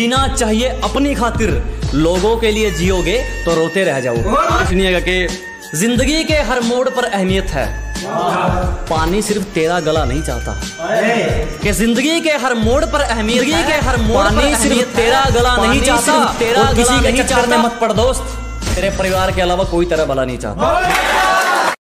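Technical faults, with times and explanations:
13.34–17.62 s, doubled audio track: a second full-band copy of the sound runs about one and a half seconds behind the first, at roughly the same loudness, so everything is heard twice. Unlike an echo or reverb, the copy has no decay, no repeats fading away and no room colour, and it starts and stops abruptly. The likely cause is the audio being captured a second time through a slower path, or an edit leaving two copies out of step.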